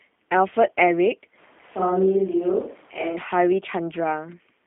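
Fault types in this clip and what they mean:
G.729 codec: The speech is rebuilt from a vocal tract filter, a pitch predictor and a few pulses per frame. Nothing passes below 200 Hz or above 3.5 kHz. The result sounds plainly rough and synthetic, which fits an 8 kbit/s G.729A coder.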